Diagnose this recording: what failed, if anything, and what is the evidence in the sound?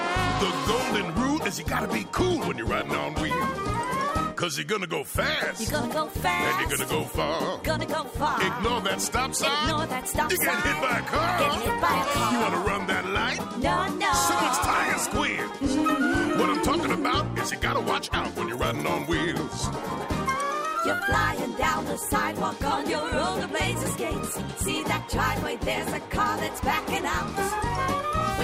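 A drift correction step at the driver or buffer stage is the likely cause: clock-matching software jumped the playback rate in one step to rebalance its buffer. From 13.07 to 13.58 s the sound runs 5.3% fast and sits about 89 cents sharp, just under a semitone, then snaps back to normal pitch and speed.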